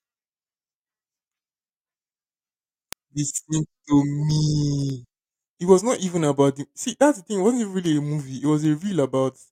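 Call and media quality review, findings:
Word clock ticks: receiving device on its own clock, not locked to the digital source, drifting by roughly 100 ppm. Single-sample slips give sharp, uneven ticks through the speech about every 0.2 s, around fifty in all, from 0.17 s to 9.44 s.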